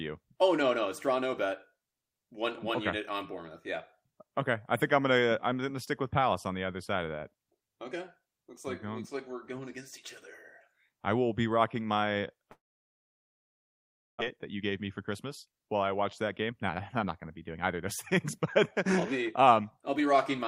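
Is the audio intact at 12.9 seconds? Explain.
No. From 12.51 to 14.22 s the sound smears into a brief fading buzz or hiss, then falls silent for about 1.6 s before returning with a second of audio missing. This is likely a long network dropout: the receiver stretched the last audio, then gave up.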